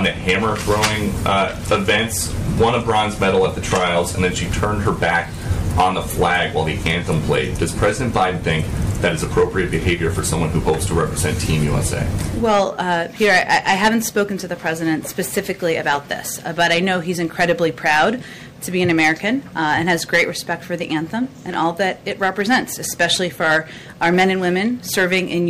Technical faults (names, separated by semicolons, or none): hard clipping